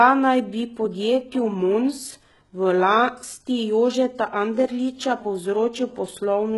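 Speech throughout carries HE-AAC compression damage, likely from a low bitrate near 12 kbps: treble is band-replicated, sibilants turn gritty and lispy, unlike plain lowpass dullness, with nothing above 11.5 kHz.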